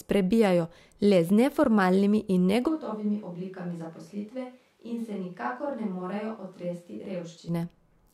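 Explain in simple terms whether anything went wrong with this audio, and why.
Something does go wrong. At 2.70 seconds the speech suddenly sounds far away, hollow and echoey, with less warmth in the low end. It also gets clearly quieter, and the faint sound of the room comes through more. This lasts until 7.47 seconds, when the close, full sound snaps back. This is a switch to a distant microphone. The likely cause is that the close microphone dropped out and a farther one, such as a camera's, filled in.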